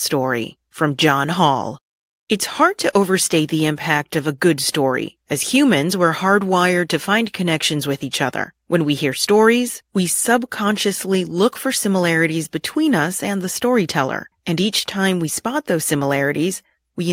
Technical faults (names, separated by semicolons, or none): none